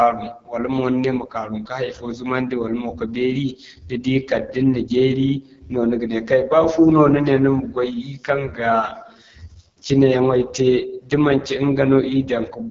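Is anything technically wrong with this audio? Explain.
Yes. Throughout, heavy AMR wideband (HD Voice) codec damage makes the speech rough and raspy, which fits its lowest 6.6 kbit/s mode, where the crude pulse-driven model breaks down. A spectrogram shows nothing above 7.2 kHz.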